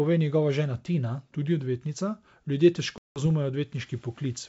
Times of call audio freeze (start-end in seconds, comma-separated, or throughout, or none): none